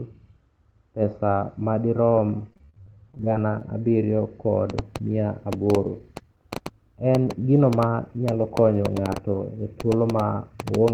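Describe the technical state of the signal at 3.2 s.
At 3.2 s the speech is inside a stretch of repeated packet loss (robotic sound) running from 2.50 to 3.69 s, between "pesa madirom" and "abiriyo kod". Nineteen short dropouts, the longest 38 ms, are each patched by extending the preceding sound, so about a quarter of the span is concealment. It sounds choppy, with pieces missing. The waveform shows repeated looped cycles and dips. The spectrogram, capped near 8 kHz by the Opus call codec, shows smeared, frozen harmonics broken by frequent vertical seams.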